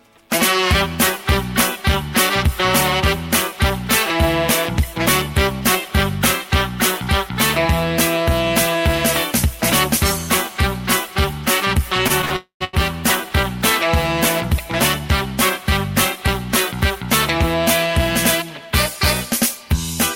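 From 12.07 to 12.75 s the sound drags and stutters through four short gaps, the longest 86 ms: repeated stalls (stutter), where late packets kept emptying the jitter buffer. Inside that stretch, from 12.36 to 12.62 s, the last sound is held as a fading buzz, then about 120 ms of silence, before resuming intact, likely a call audio freeze from delayed packets.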